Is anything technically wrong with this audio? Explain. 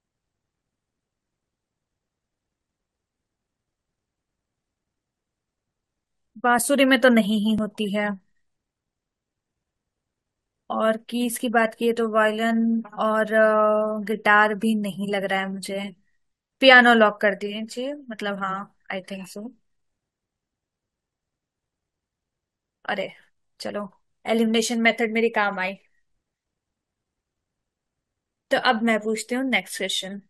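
Yes. An overlap between stream segments causes tiny skips at 6.59 s and 7.58 s. Overlapping one-second segments get trimmed, dropping about 18 ms and 6 ms of real sound.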